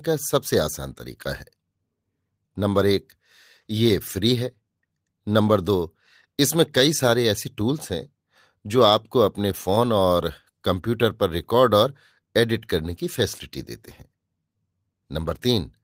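No technical faults are audible anywhere in this speech recording.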